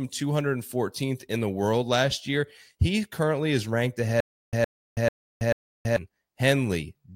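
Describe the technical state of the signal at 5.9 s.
At 5.9 s, stutter with silent gaps (4.20–5.96 s, after "currently is ranked"): a 114 ms burst repeats four times every 440 ms with 326 ms flat-line gaps, likely a stalled stream replaying its buffer.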